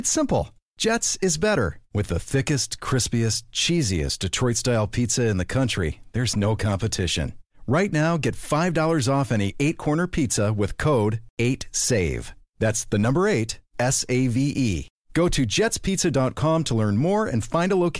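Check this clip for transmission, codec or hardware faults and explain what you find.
Nothing turned up here: the speech comes across steady and intact, with no transmission, codec or hardware trouble to point to.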